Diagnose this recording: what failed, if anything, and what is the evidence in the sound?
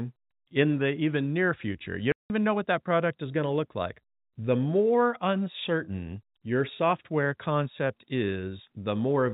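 A 180 ms silent hole cuts the speech from 2.12 to 2.3 s: network packet loss filled with silence, consistent with nine 20 ms packets.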